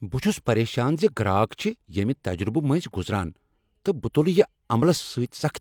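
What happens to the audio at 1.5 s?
Nothing goes wrong at 1.5 s; the speech there plays through intact, with no dropout, click, distortion or other audible fault.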